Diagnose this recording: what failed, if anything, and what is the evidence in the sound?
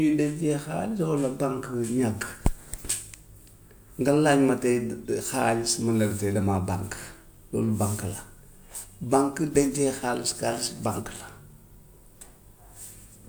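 Nothing in this speech recording points to a failure at any stage of the chain, so there's nothing here to diagnose.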